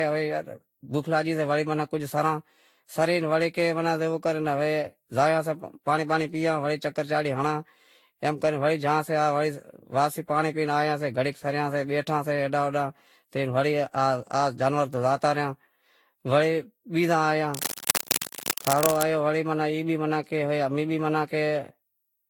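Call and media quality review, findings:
Generation loss, whole clip. Speech sounds swirly, smeared and hollow. Consonant attacks blur. Nothing audible above 19.5 kHz. Likely cause: repeated lossy transcoding, roughly seven passes. The pattern fits a Vorbis chain near 70 kbit/s. Each pass requantises on a shifted frame grid. Noise and spectral holes stack up, so it sounds worse than one encode at that rate would.

Cable scratch noise, 17.54 to 19.05 s. Dense, uneven scratching and rustling sits over the speech for about 1.5 s. It is roughly as loud as the speech itself. Probable component: a worn cable, connector or control. Likely cause: physical movement at that joint. Its contact resistance fluctuates rapidly and injects broadband noise bursts.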